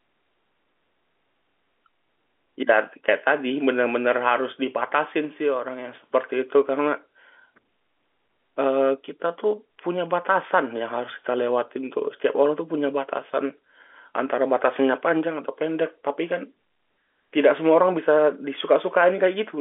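Nothing stood out on listening to this speech recording, which carries the narrow band of an ordinary telephone line.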